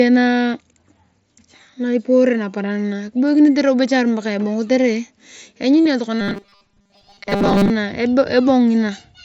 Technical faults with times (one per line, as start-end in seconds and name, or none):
5.84-5.86 concealed Bluetooth headset packet loss
6.21-7.70 robotic sound from repeated short buffers